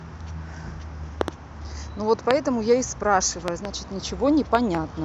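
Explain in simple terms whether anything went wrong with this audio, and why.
Sharp loud pops cut in over the speech at 1.21–1.30 s, 2.31–2.33 s, 3.48–3.67 s and 4.55–4.77 s, mostly as double clicks, likely from electrical glitches.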